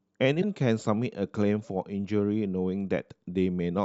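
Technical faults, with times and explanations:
0.41–0.44 s, broken MP3 bit reservoir: MP3 frames were likely cut out, so the next frame looked back for borrowed data and decoded another frame's bytes instead. The speech jumps ahead, with a garbled disturbance lasting about one 26 ms frame.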